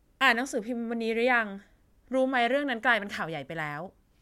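Nothing technically wrong turns up anywhere in this short bit of recorded speech, so there's no fault here to pin a time or a cause on.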